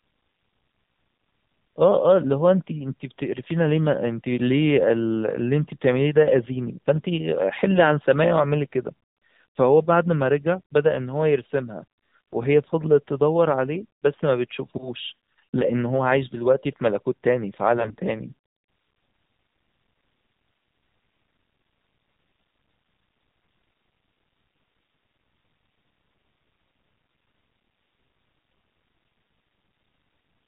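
Throughout, the speech passed through the AMR narrowband mobile codec, coding only up to 4 kHz with a sparse pulse-driven vocal-tract model. The plainly audible damage, a muffled, buzzy, synthetic-sounding voice, fits a low mode near 7.4 kbps.

From 17.78 to 17.95 s, AMR bit errors flipped several percent of the weakly protected bits, which points to around eight corrupted 20 ms frames. Misplaced pulses and skewed pitch and gain values turn the voice briefly hoarse, scratchy and gargly while keeping its pitch and level.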